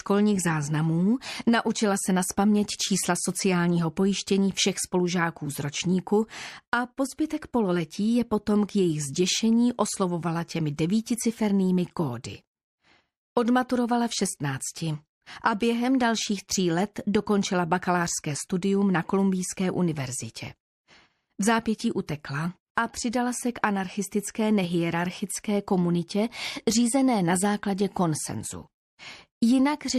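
Pre-echo appears just before five sharp attacks: 10.76 to 10.78 s, 16.94 s, 22.07 s, 22.75 to 22.77 s, and 23.11 s. Each attack gets a brief hiss lasting 17 to 25 ms, raised about 15 to 29 dB, strongest at 22.75 s, and the attacks sound softened. The smear fits a transform window of about 36 ms that never switches to short blocks. A spectrogram shows broadband columns leading each transient, and the waveform shows fuzz before each onset.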